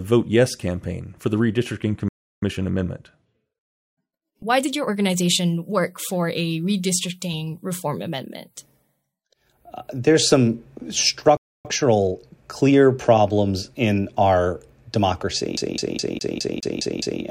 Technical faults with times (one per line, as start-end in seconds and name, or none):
2.08-2.42 playback stall
2.42-5.42 time-compressed catch-up
11.37-11.65 playback stall
11.65-12.75 time-compressed catch-up
15.57-17.22 CD stuck on one turn